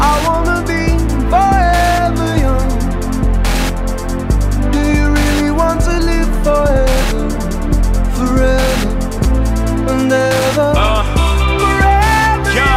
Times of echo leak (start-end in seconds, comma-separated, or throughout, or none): none